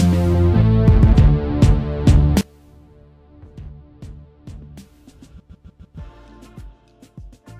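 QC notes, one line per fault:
2.41–7.59 s, one channel inverted: from 2.41 s the centred content drops by about 24 dB, leaving a faint residue. The likely cause is one stereo channel flipped in polarity, so material shared by both channels cancels when summed to mono.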